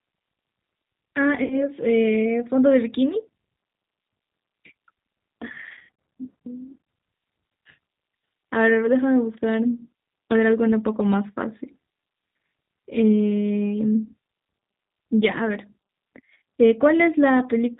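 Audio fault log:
throughout: G.729 codec. The speech is rebuilt from a vocal tract filter, a pitch predictor and a few pulses per frame, at a rate that fits an 8 kbit/s coder. The damage is plainly audible as a rough, slightly synthetic voice. On a spectrogram, energy stops sharply at 4 kHz with nothing above it, and harmonics look smeared and grainy. The waveform looks normal in level, but its fine detail is simplified.
1.44 to 1.56 s and 5.75 to 5.89 s: VoIP packet loss concealed by the speech codec. At the first gap, 60 ms of sound was lost. At the second, 160 ms was lost in pieces over 240 ms, with at most 60 ms missing in one run. The decoder repeats its last pitch and filter at falling gain, so the sound turns into a buzzy tone or coloured noise and fades, then stays weak briefly after it recovers. On a spectrogram, these show as flat, repeated harmonic bands. On the waveform, the envelope dips and then recovers.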